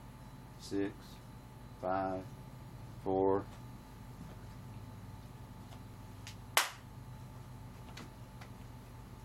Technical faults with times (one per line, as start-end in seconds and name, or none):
5.94 overlap between stream segments